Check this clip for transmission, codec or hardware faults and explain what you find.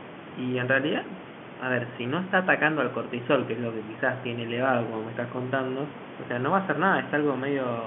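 Found nothing faulty.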